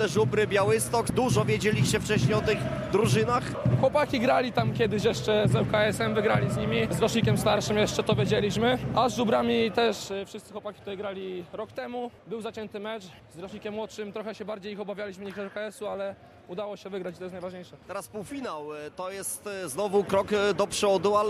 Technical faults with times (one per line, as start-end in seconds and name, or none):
9.84-10.24 zipper noise